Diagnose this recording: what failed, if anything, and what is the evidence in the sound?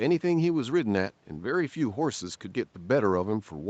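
Nothing failed in this recording; the sound gives no evidence of any fault, only the expected call processing with nothing above 8 kHz.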